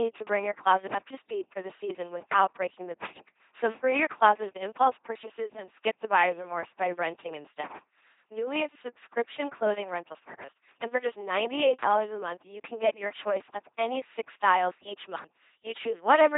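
The speech has a buzzing, mechanical robot quality from start to finish, with no content above about 3.8 kHz. This is the LPC-10 vocoder at 2.4 kbit/s. It drives a short all-pole vocal tract filter with either a pulse train or noise, so each moment is forced to be fully voiced or fully unvoiced. The damage is heavy.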